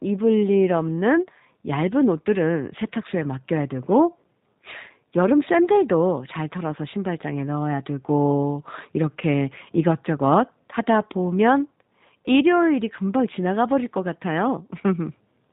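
From start to finish, the speech carries plainly audible G.729 codec damage. The sound has been squeezed through a low-rate voice coder that rebuilds each 10 ms frame from a vocal tract model, a pitch estimate and a few pulses. Nothing above 4 kHz survives, so the top end sounds dull and boxy. Voices come out rough, buzzy and faintly synthetic. The character fits the 8 kbit/s G.729A variant.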